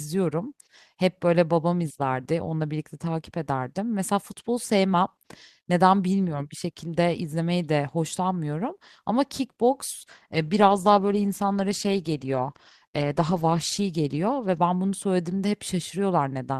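A speech recording with a call bitrate drop from 10.02 s to 15.17 s. The sound turns coarse and rough there. It stays at its worst for about 3.8 s before recovering. The loss of detail points to the encoder falling from 32 kbps to 14 kbps. The call's bandwidth estimate fell, so the codec had far fewer bits per frame. It had to quantise the signal crudely, and the audio degraded until the rate came back.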